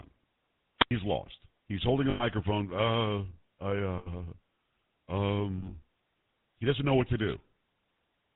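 Throughout the speech, the GSM full-rate codec leaves a buzzy, gravelly grain on every syllable and a dull top with nothing above 4 kHz, which fits the 13 kbps GSM full-rate stream. The codec models the vocal tract and excites it with a coarse, regularly spaced pulse train, so the roughness rides on the voice itself rather than sitting underneath as noise. That sets it apart from simple band-limiting, which dulls the sound without adding grit.

From 0.78 to 0.91 s comes a wireless microphone squelch dropout. Hiss rises briefly, then the output falls into a hole of near silence about 90 ms long before the voice returns. The FM radio link faded far enough that the receiver's squelch shut the output. The rising static before the gap is what distinguishes it from a codec frame loss, which never hisses.

The three remaining events are lost GSM frames: 2.10 to 2.24 s with 100 ms missing, 3.98 to 4.13 s with 80 ms missing, and 5.58 to 5.75 s, where 100 ms of losses are scattered over 160 ms in short bursts, the longest around 40 ms. 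At each one the decoder kept repeating the last good frame's settings, so the sound hangs as a rough, metallic ring instead of dropping out cleanly. That ringing hold, rather than silence or static, separates these events from the squelch dropout.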